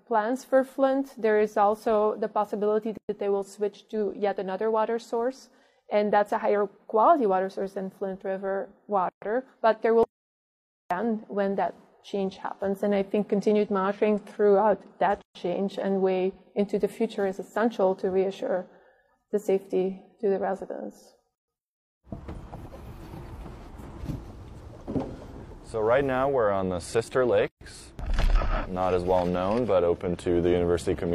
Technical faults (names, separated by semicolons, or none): gap at a join of encoded pieces; audio dropout to silence